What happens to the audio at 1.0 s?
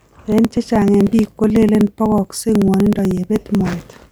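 At 1.0 s you're in the middle of periodic USB or driver dropouts, running 0.08 to 4.04 s. Every 62 ms about 2 ms of speech gets skipped, so you hear steady little ticks.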